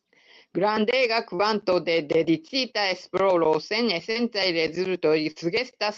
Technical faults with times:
1.35-1.42 short concealed packet loss
4.11-4.18 short concealed packet loss
5.31-5.39 burst of packet loss

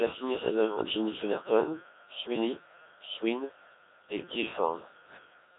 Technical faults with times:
0.00-5.58 Codec 2 vocoder

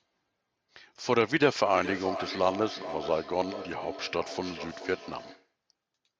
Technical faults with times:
1.66-5.54 feedback echo between two devices

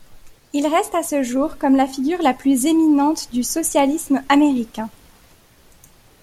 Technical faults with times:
none

